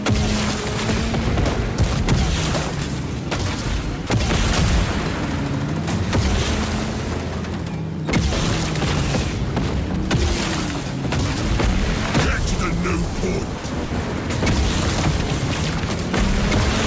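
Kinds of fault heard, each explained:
Sound dropped by the voice detector: three short gaps where the audio briefly turns into steady noise, 30 ms at 4.07 s and 60 ms each at 13.58 and 13.85 s, likely the sender's detector treating quiet sound as background and comfort noise filling in.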